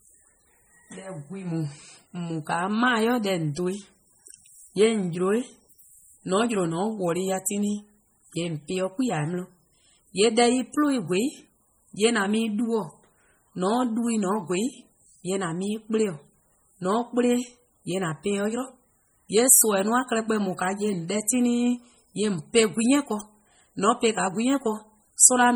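A speech recording with heavy MP3 compression damage from start to end. The sound is watery and swirly, and s sounds chirp metallically. Weak frequency lines drop in and out between frames, which likely points to a starved bitrate near 32 kbps. Nothing sounds above 20.9 kHz.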